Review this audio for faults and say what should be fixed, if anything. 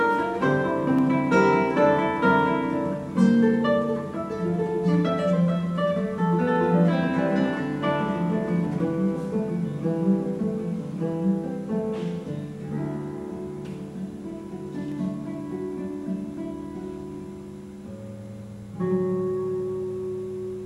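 Sharp single clicks sound at 0.99 s, 8.80 s and 14.92 s. Each is likely dropped samples. A fraction of a millisecond of the stream goes missing, so the waveform jumps abruptly. Nothing audible is lost. To prevent it, give the capture and playback buffers enough headroom to avoid underruns.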